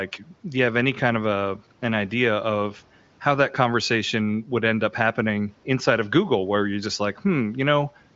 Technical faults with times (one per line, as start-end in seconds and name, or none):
none